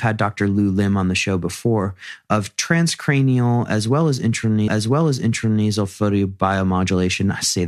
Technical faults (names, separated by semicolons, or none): stream segment repeated